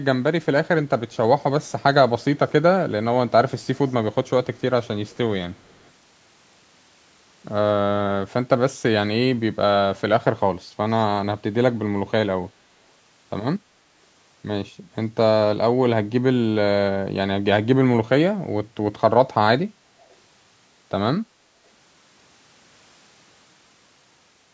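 Echo leak appears at 1.11 to 1.83 s, 2.22 to 2.52 s, 3.6 to 3.93 s, 4.28 to 5.17 s, 5.53 to 5.91 s, and briefly at 20.09 to 20.15 s. A faint copy of the speech trails it by 250 ms, sitting well below the direct signal, strongest near 3.6 s. The likely cause is a loudspeaker on one end whose echo canceller left residual pickup in the returned signal. The band-limited call processing tops out at 8 kHz.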